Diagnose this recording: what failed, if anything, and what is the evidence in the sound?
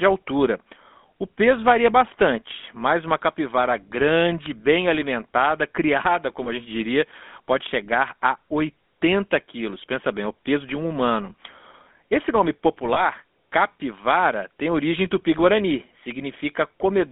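The codec stage is the culprit: GSM full-rate coding runs throughout, with a buzzy, gravelly texture and nothing outside roughly 250 Hz to 3.5 kHz. That comes from pulse-excited vocal-tract modelling.

On the network side, there are lost GSM frames at 6.44–6.48 s and 12.94–13.01 s. Each is a brief metallic ring where the decoder replayed the previous frame's settings, which fits one dropped 20 ms frame.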